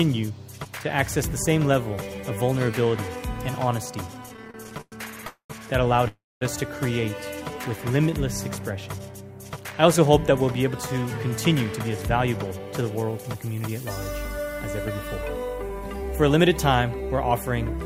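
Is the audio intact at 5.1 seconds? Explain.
No. Repeated stalls (stutter) run from 4.23 to 5.25 s. Late packets kept emptying the jitter buffer, so the last sound is stretched repeatedly. The audio drags, with gaps up to 107 ms.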